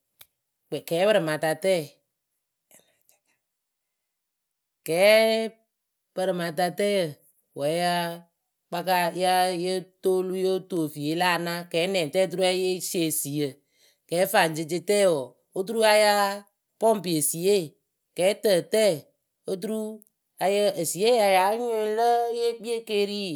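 No technical faults can be heard anywhere in this recording.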